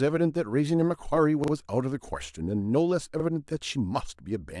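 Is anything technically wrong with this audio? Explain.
Yes, two repeated buffers in the speech. At 1.44–1.52 s a roughly 40 ms chunk plays twice more, and at 3.2–3.24 s once more, since fresh audio arrived late and the device replayed the last block. Each sounds like a hard-edged stutter, with nothing seemingly skipped.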